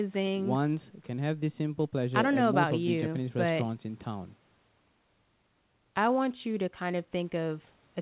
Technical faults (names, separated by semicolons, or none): none